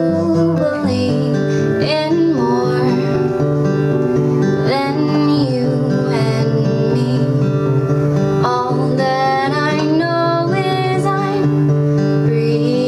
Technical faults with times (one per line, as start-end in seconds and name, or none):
0.00-12.88 gain pumping